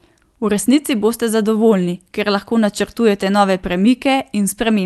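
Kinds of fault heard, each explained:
No faults can be heard in this speech.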